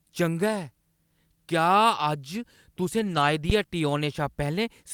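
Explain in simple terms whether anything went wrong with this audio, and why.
Lost packet rebuilt from error correction, from 2.99 to 3.21 s: six separate packets of speech data went missing in transit, but each following packet carried a rough backup copy. The player filled about 120 ms with those copies, so the speech continues without a gap but sounds grainier and noisier there.

Phantom power thump, from 3.50 to 3.88 s: the microphone's power supply was switched while the input was live. That sudden electrical jump comes through as a deep thump that dies away over about 86 ms.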